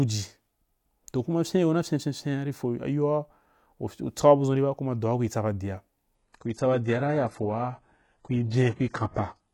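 At 6.15 s, just after "kui tsa ba dia", the speech abruptly switches to an adaptive stream at a lower bitrate, which lasts to the end at 9.54 s. Nothing remains above 11.4 kHz, suggesting a step down from high-rate AAC to a very low-rate HE-AAC stream. Unlike a dropout or packet loss, there is no gap or glitch at the change. The quality simply drops and stays down.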